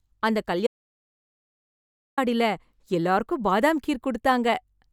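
At 0.67 s the speech cuts out mid-flow and returns at 2.18 s: an audio dropout to silence lasting about 1.5 s. The gap is silent with no room tone, which points to a likely input loss while recording continued.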